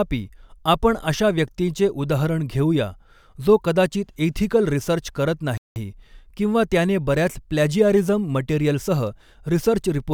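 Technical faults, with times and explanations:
5.58 to 5.76 s, playback stall. Right after "एथिकल रिसर्च करत", the speech cuts to silence for 185 ms, then carries on. It sounds like a hard stop in mid-flow, not a natural pause. The player likely ran out of data or was briefly blocked.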